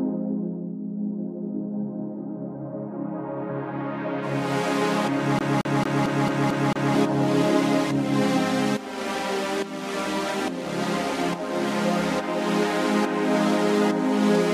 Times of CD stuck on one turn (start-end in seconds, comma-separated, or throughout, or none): 5.39-6.95